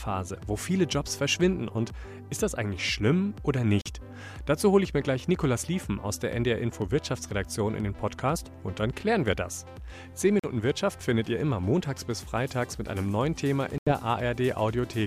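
Silent gaps hit at 3.81 s, 10.39 s and 13.78 s, the last roughly twice as long. The sound resumes as if it had played on, likely a Bluetooth dropout.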